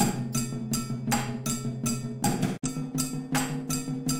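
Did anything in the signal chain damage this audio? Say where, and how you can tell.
Yes, there's a digital broadcast dropout at the reception stage, from 2.56 to 2.68 s. The sound fades out over about 20 ms and goes silent. The roughly 43 ms hole fits a single bad frame that the receiver muted rather than decoded.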